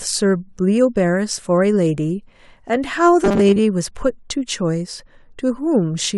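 From 3.24 to 3.60 s the speech turns into robotic sound from repeated short buffers: a rigid, metallic buzz fixed at 200 Hz that still loosely tracks the phrasing. The likely cause is audio arriving too slowly, so about half of this stretch is filled by looping a 5 ms fragment while real audio is skipped. On a waveform the segment shows identical 5 ms cycles; a spectrogram shows flat harmonics every 200 Hz replacing the natural pitch contour.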